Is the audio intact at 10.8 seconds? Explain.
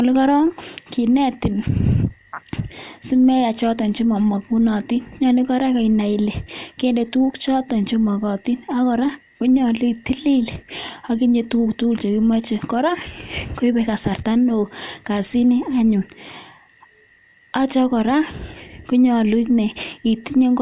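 Yes, the speech at 10.8 seconds plays through without any dropout, click, distortion or other fault.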